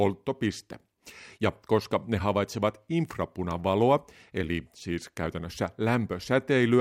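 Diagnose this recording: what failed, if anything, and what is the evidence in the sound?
Throughout, a faint hiss roughens the speech, strongest on loud, bright sounds and gone in pauses: converter sample clock jitter of a few microseconds.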